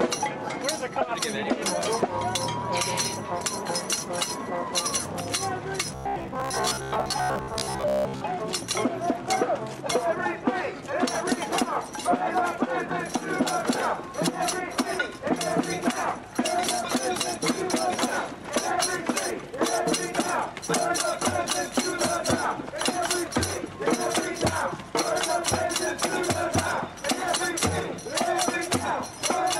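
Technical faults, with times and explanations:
5.92 to 8.26 s: robotic sound from repeated short buffers. A rigid, metallic buzz at 66.7 Hz runs through the sound. That pitch fits a 15 ms chunk replayed again and again. Likely cause: audio arriving too seldom, so most of it is skipped and filled by repeats.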